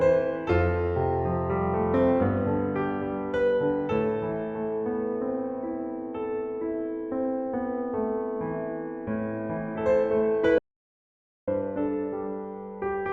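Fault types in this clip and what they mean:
Audio dropout to silence: from 10.58 s to 11.48 s the sound stops abruptly and about 0.89 s of silence follows, with no room tone or noise floor at all, before the audio resumes mid-flow. The likely cause is a lost input, such as a disconnected device, a failed link or a stray mute, while recording carried on. On a waveform it is a flat line. A spectrogram shows a dark vertical band with hard edges.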